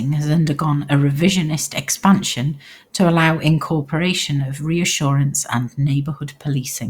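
No technical faults can be heard anywhere in the recording; the signal stays continuous and stable throughout.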